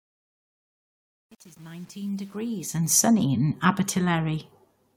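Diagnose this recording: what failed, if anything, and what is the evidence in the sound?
Truncation distortion on the fade-in, 0.00 to 2.98 s, worst before 2.59 s: a gain or format stage dropped bits without dither, leaving gritty speech, consistent with about 8 bits.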